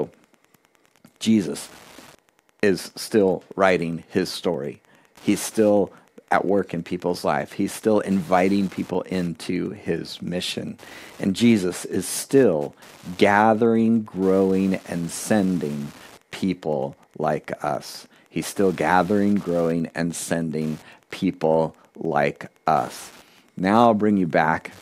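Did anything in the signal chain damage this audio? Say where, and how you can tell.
Yes. Wi-Fi interference has entered the analogue wiring and runs through the whole speech clip. A steady tick repeats every 102.4 ms, about ten times a second, sitting roughly 30 dB below the speech. A nearby Wi-Fi radio's beacon and data bursts are rectified by the analogue circuit and demodulated into audible pulses. Mobile-phone buzz would instead be a dense 217 Hz burr, and mains hum a continuous low tone.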